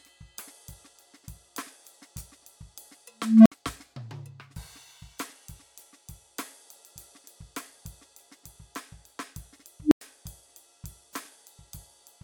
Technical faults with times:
3.17-3.52 unstable filter
9.82-10.01 unstable filter

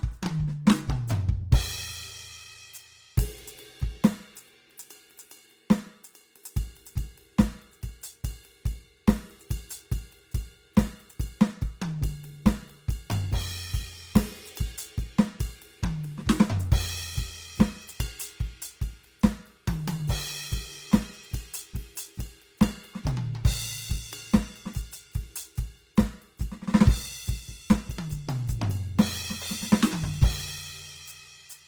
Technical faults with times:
0.00-31.67 Opus compression

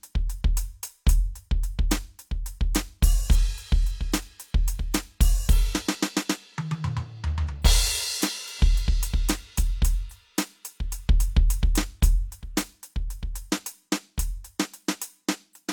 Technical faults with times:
0.26-15.25 periodic USB or driver dropouts

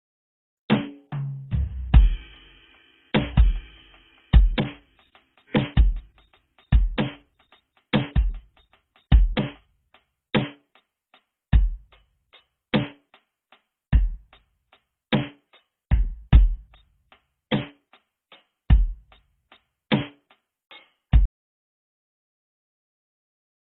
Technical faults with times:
0.00-23.77 transcoding between lossy codecs
3.19-9.55 doubled audio track
21.25-23.77 audio dropout to silence

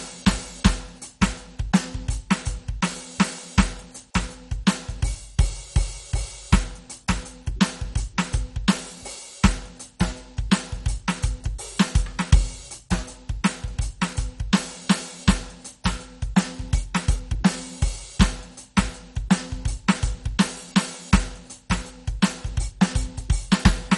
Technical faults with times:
0.00-23.97 MP2 compression

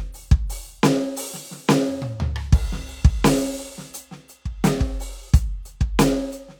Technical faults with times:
none

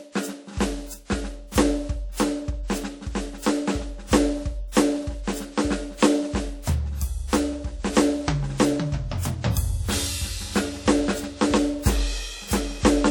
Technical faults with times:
0.00-13.11 WMA compression

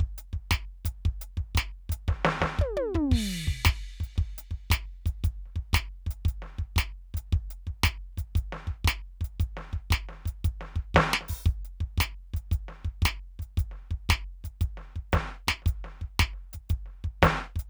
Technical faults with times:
none

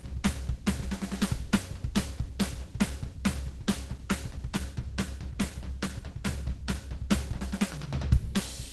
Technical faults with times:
0.00-8.73 Opus compression

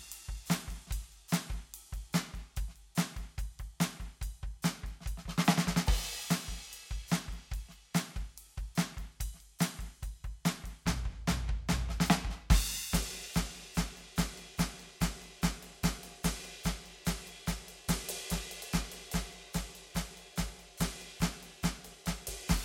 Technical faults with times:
0.00-22.64 periodic clock jitter

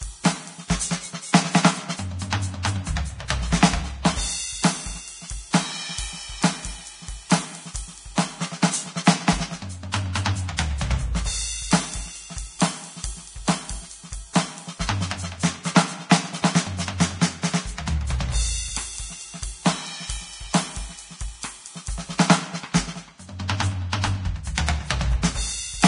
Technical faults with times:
0.00-25.88 low-bitrate audio saved at a high bitrate

